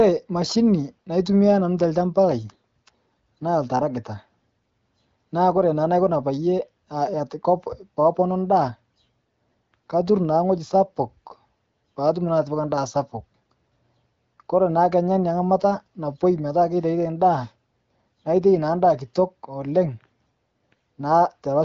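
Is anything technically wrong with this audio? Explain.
No, nothing's wrong here: it's ordinary speech carried over an AMR wideband (HD Voice) call path, so the top end stops at around 7.5 kHz and there's a light coding texture, which is just how that codec sounds when it's working as it should.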